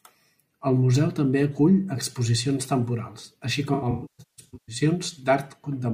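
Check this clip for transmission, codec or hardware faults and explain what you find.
One fault is present. From 3.74 to 4.75 s there is AAC frame loss with concealment. Lost frames are rebuilt from the last good spectrum. The speech turns smeared, noisy and phasey in bursts of up to about 150 ms.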